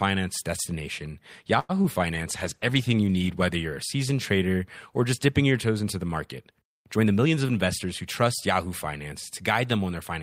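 From 1.59 to 1.74 s there is a short stall from a late packet. A packet arrived late and the jitter buffer ran dry, so the receiver held the last sound for about 98 ms until it came in, then resumed from the same point. Nothing is lost, but a sound is audibly held too long, and the playout delay rises by 98 ms.

At 1.82 to 1.86 s comes a short concealed packet loss. About 20 ms of audio never reached the decoder in time. The receiver extended the preceding sound to cover the gap and blended back into the real signal, which is heard as a brief smear or wobble.

From 2.15 to 3.40 s, ending just before "you're a seasoned trader", a call bitrate drop takes the Opus encoder from 32 to 14 kbps after the bandwidth estimate fell. It sits at the lowest rate for 1.18 s. The coarser coding makes the speech sound degraded until the rate recovers.

Between "toes into the market" and "of investors who trust", at 6.97 to 7.26 s, a jitter buffer speed-up trims excess buffered audio. 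It removes short pitch-period pieces, roughly 50 ms in total. Playback runs at 114% speed with the pitch unchanged, so this stretch sounds hurried.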